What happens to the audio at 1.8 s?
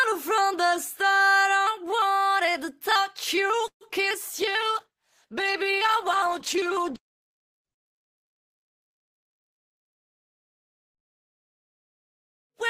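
Nothing goes wrong at 1.8 s; the audio runs on intact through that moment with no audible fault.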